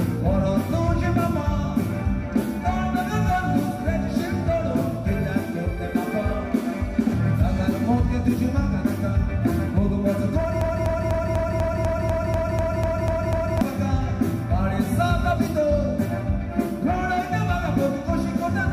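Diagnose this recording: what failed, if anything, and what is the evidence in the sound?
A broken-record loop runs from 10.61 s to 13.61 s. A fragment about 0.25 s long repeats exactly, back to back, twelve times. Each pass is identical, with no variation between them. The stage is most likely a buffer in the player, encoder or stream path that stalled and kept resending the last block it held. The audio that belonged in those three seconds never arrives. Playback resumes at 13.61 s, after the loop.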